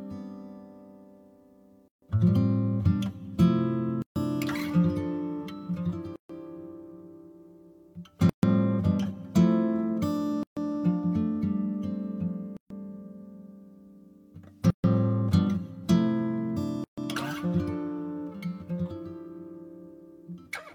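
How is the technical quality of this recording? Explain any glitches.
The recording is repeatedly interrupted by short dropouts. A gap at a join of encoded pieces occurs at 1.88, 4.02, 6.16, 8.29, 10.43, 12.57, 14.70 and 16.84 s. Each is a gap of about 136 ms (141 ms for the first) with smeared edges, after which the sound resumes where it left off. The pattern points to 2-second segments encoded separately and joined without removing each encoder's start delay and end-frame padding. On a waveform each gap is a flat notch with smeared edges. On a spectrogram it is a narrow vertical blank band with smeared edges.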